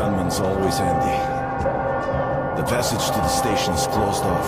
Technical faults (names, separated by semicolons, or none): none